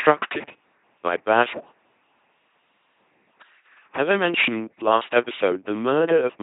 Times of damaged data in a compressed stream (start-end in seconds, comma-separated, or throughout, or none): none